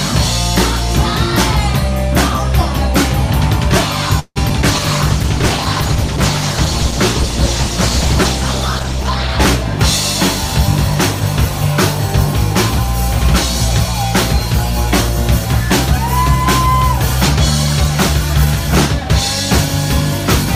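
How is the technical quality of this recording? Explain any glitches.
The recording has a cluster of network glitches around 4.2 s, followed by several seconds of degraded, lower-fidelity sound.

From 4.19 to 4.38 s there is a call audio freeze. The last sound stretches into a fading buzz, then about 50 ms of silence, before resuming. This is likely a jitter buffer running empty, adding roughly 160 ms of delay.

Short concealed packet loss follows at 4.50 s and again from 4.62 to 4.64 s. Each is a brief smear or wobble where about 20 ms never arrived, and in the second the decoder extrapolated the preceding audio.

A call bitrate drop runs from 4.72 to 9.35 s. The sound turns rough, watery and dull because the encoder fell from 96 to 14 kbps, coding coarsely and trimming high frequencies.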